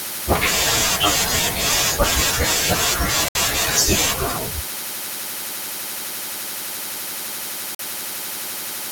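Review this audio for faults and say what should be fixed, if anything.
Two brief dropouts in the speech, at 3.28 to 3.36 s (68 ms of silence) and 7.75 to 7.80 s (46 ms), where the sound cuts out and then resumes. It's likely a Bluetooth stall: interference held up packets, the headphone buffer ran dry, and playback paused until the resent packets arrived. A wired connection or less radio interference would prevent it.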